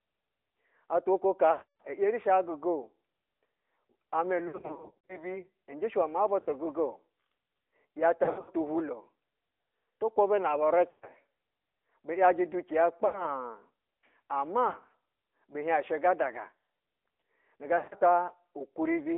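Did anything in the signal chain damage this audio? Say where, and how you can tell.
Yes. At the codec stage, the whole clip is band-limited to roughly 300 Hz to 3.6 kHz, with plainly audible buzzy, synthetic coding damage. This is the AMR narrowband mobile codec: a vocal-tract model with sparse pulse excitation, at a rate that fits about 10 kbps.

At the network stage, lost AMR speech frames are heard at 1.52–1.82, 4.48–5.37, 6.40–6.48, 8.24–8.53, 10.90–11.08, 13.06–13.33, 14.68–14.76 and 17.78–18.03 s. Each dip, smeared warble or drawn-out fade toward silence comes from the decoder repeating the last good parameters at falling gain, over about 60 to 360 ms of lost audio.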